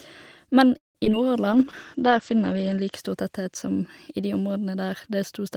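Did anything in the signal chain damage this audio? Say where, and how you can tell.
Yes, three kinds of network and codec damage.

From 0.77 to 0.97 s the sound stretches into a fading buzz, then about 150 ms of near-silence before resuming where it stopped. This is likely a call audio freeze: delayed packets emptied the jitter buffer. A spectrogram shows a smeared frame dissolving into a blank strip.

Short concealed packet loss occurs at 1.05 s and from 1.12 to 1.30 s. About 20 ms is missing each time, and the gap is patched with extrapolated sound. These appear as brief blurred smudges with soft seams.

A call bitrate drop runs from 1.52 to 2.99 s, ending just before "stor tetthet som i". The encoder fell from 32 to 11 kbps and the bandwidth narrowed from 20 kHz to 8 kHz, so the audio turns muffled and rough. On a spectrogram, everything above 8 kHz is sharply cut away.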